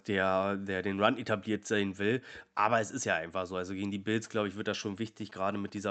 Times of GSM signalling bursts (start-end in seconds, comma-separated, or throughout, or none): 4.27-5.90